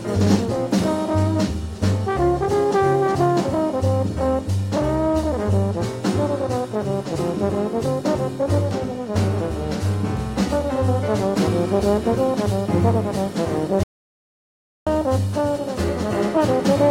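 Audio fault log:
13.83–14.87 s, audio dropout to silence: the sound cuts out for about 1.03 s with no room tone. Input was likely lost through disconnection, link failure or muting.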